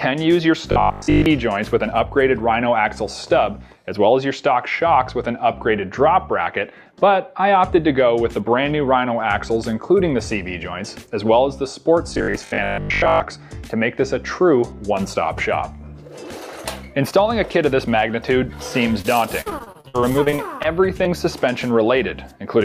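From 0.72 to 1.26 s, and again from 12.14 to 13.24 s, the sound turns into a rigid 50 Hz buzz. This is robotic sound from repeated short buffers. It likely comes from a player that starved for data and kept replaying a roughly 20 ms chunk while most of the real audio was skipped. On a spectrogram it appears as vertical striping every 20 ms with a comb of harmonics spaced 50 Hz apart. The waveform shows near-identical blocks repeating.

At 19.01 to 19.16 s there is short concealed packet loss. About 20 ms never arrived, and roughly 24 ms was filled by extending the preceding sound before blending back. It is heard as a brief smear or wobble. A spectrogram shows a short, blurred, flattened patch with a slight seam where real audio resumes.

From 19.41 to 20.66 s, repeated packet loss (robotic sound) sets in. Around a dozen holes, the longest 59 ms, are each patched by continuation, so about a quarter of the stretch is synthesized. 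The result is choppy, with pieces missing. On a spectrogram it looks like a patchwork of smeared slices interrupting the normal detail.

At 21.04 to 21.07 s, another short concealed packet loss fills a 20 ms gap with about 11 ms of extended sound, leaving a brief smear or wobble.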